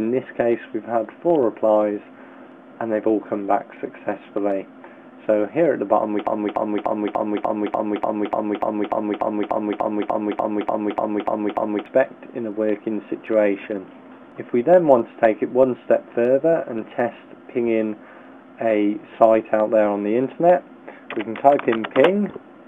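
From 6.27 s to 11.86 s the audio falls into a broken-record loop. A fragment of about 0.29 s plays 19 times back to back, identical each time. The likely cause is that the player, encoder or stream stalled and kept resending the last piece it held, so the audio that belonged in those seconds is lost. Unlike an echo, each repeat keeps its full level with no decay, and unlike a brief skip, the loop runs on for more than five seconds.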